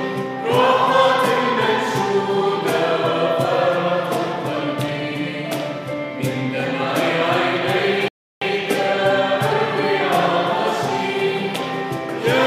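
At 8.08 s the playback hits a rebuffering stall: the player exhausts its downloaded audio and halts until more data arrives. The sound drops to silence until 8.42 s, then resumes exactly where it stopped, with nothing lost but roughly a third of a second added.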